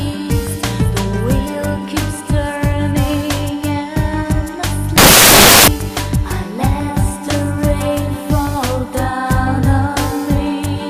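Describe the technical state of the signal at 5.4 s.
At 5.4 s the reader is assembling each sample from the wrong bytes, misaligned or in swapped order, so rapidly changing low bits land in the high part of every value. From 4.98 to 5.68 s this replaces the sound with loud, harsh broadband noise.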